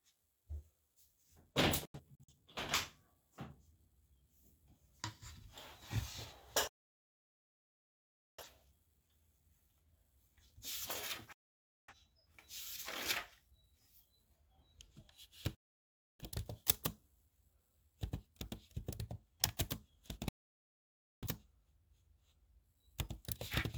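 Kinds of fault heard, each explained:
digital broadcast dropout: The receiver stopped getting frames it could decode, through signal loss or failed checksums, and muted its output until clean frames arrived again. The sound snaps to silence with a fade of about 3 ms, then resumes further on with the intervening material gone. The first dropout, from 1.85 to 2.32 s, is a scatter of short holes. Solid gaps follow at 6.67 s (1.7 s long), 11.33 s, 15.55 s and 20.29 s (nearly a second).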